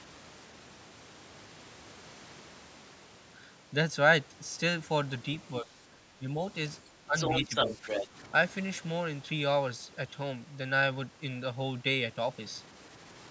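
From 5.61 to 5.69 s, 6.18 to 6.4 s, and 6.88 to 7.15 s, the speech dips briefly, by up to about 10 dB. This is speech suppressed in double talk. The echo canceller likely could not tell the talker from loudspeaker echo, so it turned both down. From 7.18 to 8.06 s, the other side's voice leaks through, about as loud as the talker. The canceller likely left this loudspeaker echo in the microphone signal. During and just after that stretch, the speech drops again, by about 10 dB from 7.44 to 7.86 s and by about 5 dB from 8.06 to 8.17 s.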